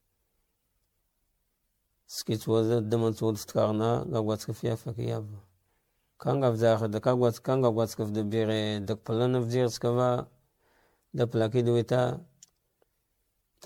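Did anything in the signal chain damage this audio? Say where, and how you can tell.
Yes, at the codec stage: the speech was likely re-encoded as MP3 around ten times, which fits a 96 kbit/s chain, causing generation loss. Throughout, it sounds swirly, smeared and hollow, and attacks blur, as each pass requantises on a shifted frame grid; nothing remains above 19.9 kHz.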